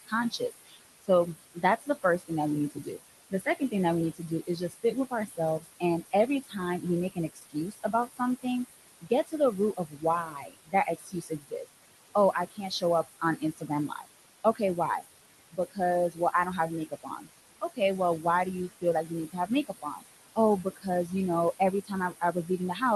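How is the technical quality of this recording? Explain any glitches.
The quality is compromised by noise suppression that is too aggressive. It affects both the background and the speech.

Noise suppressor artifacts run through the whole clip. Steady room noise, only about 11 dB below the speech, is pulled down by about 19 dB between phrases.

Speech cut by the noise suppressor occurs from 0.05 to 8.45 s, about two seconds in all, with drops of about 20 dB. The suppressor mistakes quiet consonants and endings for noise, so they sound swallowed.

The same speech cutting returns from 9.01 s to the end, with drops of about 21 dB. Soft parts of the speech fade out with the background and sound faint.

The call path's bandwidth, which is consistent with Opus limited to 12 kHz, sets the ceiling on high frequencies.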